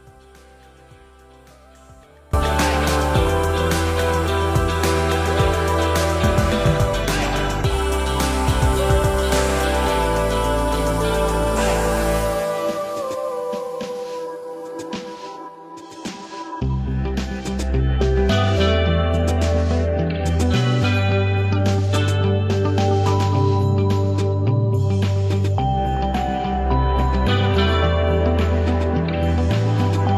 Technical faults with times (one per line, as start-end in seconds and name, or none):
0.00-2.33 audio dropout to a faint residue